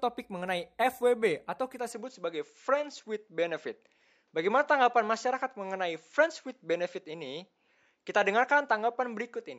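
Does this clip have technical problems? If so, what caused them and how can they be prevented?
Yes. Right after "atau kita", at about 1.92 s, the sound changes character and stays that way to the end. Nothing comes through above about 7.6 kHz, so it turns duller. The level shifts by a few dB, and a faint new background noise sits well under the speech. There's no gap at the switch. It's likely an input switched to a poorer device mid-recording. To prevent it, pin the input device in the recording settings and disable automatic switching.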